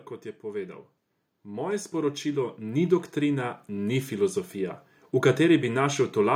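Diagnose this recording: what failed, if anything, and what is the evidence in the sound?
Automatic gain rising in the call processing: from 1.45 to 4.84 s the AGC slowly lifts level by about 10 dB, so speech and background swell together.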